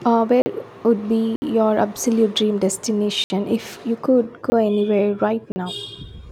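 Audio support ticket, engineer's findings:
Output buffer likely not filled in time, samples zeroed: block of digital silence in the speech at 0.42–0.46, 1.36–1.42, 3.24–3.30, 4.50–4.52 and 5.52–5.56 s. Gaps of 20–60 ms, hard cuts with no fade, heard as short holes.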